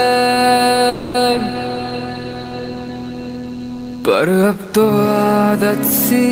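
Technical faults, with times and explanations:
throughout: DECT cordless phone buzz. A nearby DECT handset or base station transmits a radio burst every 10 ms, which the audio circuitry rectifies into a faint, thin 100 Hz buzz with many harmonics, sitting well below the main sound the whole time.
0.89 to 1.21 s: call audio freeze. Packets were likely held up in transit, emptying the jitter buffer. The receiver stretched the last sound into a fading buzz or hiss for about 250 ms, then resumed exactly where it stopped, so nothing is missing but everything afterwards runs 250 ms late.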